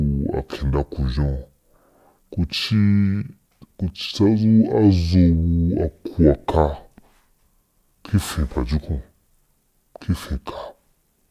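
From start to finish the speech runs slow and low, the mark of a wrong sample rate: the audio is clocked out at a different rate than it was captured, with no conversion. Everything moves at 0.667 times normal speed and sits about 7 semitones flat, which fits 48 kHz material played at 32 kHz. Unlike a pitch shift or time stretch, tempo and pitch fall together by one ratio, with no warbling or processing artefacts.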